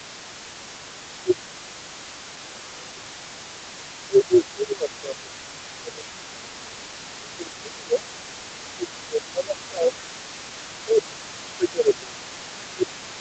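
From the start of the clip, the talker's speech repeatedly dips and thins in a pattern that points to speech suppressed in double talk. The drops fall at 0.00–1.79 s, 2.41–3.76 s, 4.04–6.09 s, 6.28–8.09 s, 8.34–10.08 s and 10.72 s to the end. At their deepest they are around 15 to 20 dB down. The likely cause is an echo canceller that could not tell the near talker from the far side's loudspeaker echo and attenuated both together.

Running underneath for the whole clip, roughly 0 to 13.2 s, is a faint second voice: the other side's voice leaking through. It sits about 20 dB below the main speech. This is most likely far-end audio from the talker's loudspeaker that the echo canceller did not fully remove from the microphone signal.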